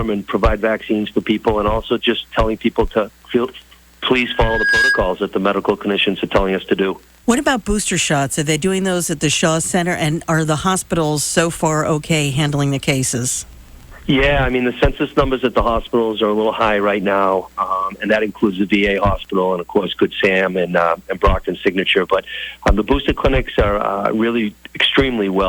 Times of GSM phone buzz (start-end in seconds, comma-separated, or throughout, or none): none